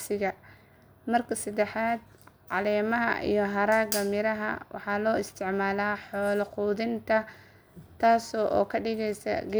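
From 1.24 s to 2.74 s the speech carries sample clock jitter, ending just before "iyo haragga miraha". The converter's timing wanders on the order of a microsecond or two, so each sample is captured slightly off its proper instant. Where the waveform changes fastest, that timing slip becomes an amplitude error some 35 dB below the signal. It is heard as a grainy hiss riding on louder, brighter sounds, dropping away in the quieter gaps.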